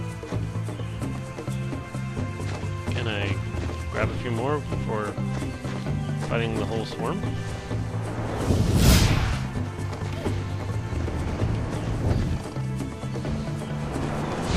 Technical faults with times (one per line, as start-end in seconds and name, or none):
none